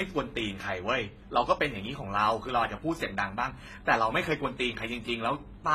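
Speech that has most likely passed through a chain of lossy codecs, transcoding between lossy codecs, running the whole clip. The pattern fits a low-rate HE-AAC encode, then an AAC-LC pass, then HE-AAC again, each at only a few tens of kbit/s. Every stage re-encodes the previous one's artefacts and adds its own, so the artefacts pile up and sound layered rather than uniform. Above 14.7 kHz there is nothing at all.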